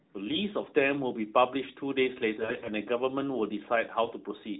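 AMR bit errors from a weak link corrupt the less protected codec bits at 0.58–0.72 s, 2.38–2.70 s and 4.04–4.13 s. The narrowband speech turns hoarse, scratchy and gargly, while pitch and level hold.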